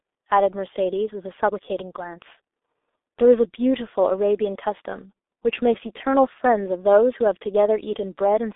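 G.723.1 codec damage runs through the whole of this speech recording, from start to finish. The sound is confined to a telephone band of roughly 300 Hz to 3.6 kHz, with nothing above 3.8 kHz. That loss of treble leaves it muffled. The codec models the voice in coarse 30 ms frames at a very low rate, fitting about 6 kbit/s. The damage is heavy: a hoarse, buzzy texture and smeared consonants where fast changes outrun the frame updates.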